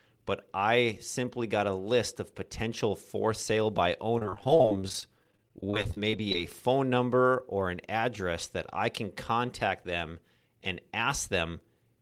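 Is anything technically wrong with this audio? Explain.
Yes. From 4.18 to 6.35 s the speech suffers repeated packet loss, giving a robotic sound. Audio kept failing to arrive in short holes, the longest around 30 ms, and each was patched by extending the preceding sound, so about a fifth of that stretch is synthetic fill, heard as choppy, robotic chatter with fragments missing.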